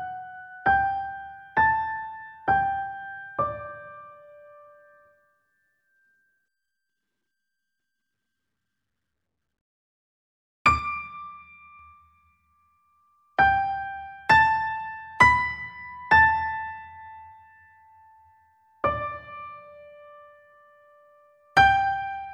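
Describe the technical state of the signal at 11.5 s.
At 11.5 s the signal shows channel delay (comb filtering), running from 10.79 to 11.79 s. One channel lags the other by around 5 ms, and the mono sum cancels shared content at evenly spaced frequencies starting near 100 Hz, leaving a hollow, phasey tone.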